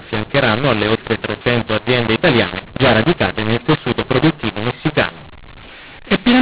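Throughout the speech, harsh gritty distortion sits on every syllable, some peaks jump out too loud while others sink, and pauses hiss instead of falling silent. This is mu-law and A-law mixed up: A-law telephone audio was decoded as mu-law, so each code lands at the wrong level.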